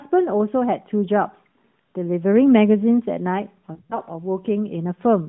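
At 3.74 to 3.99 s you get lost AMR speech frames. Radio errors spoiled about 120 ms of frames spread over roughly 160 ms. The decoder stretched the last good frame with falling gain, so the sound smears and sags through the longest 100 ms gap before the light, fairly clean AMR-NB narrowband line returns.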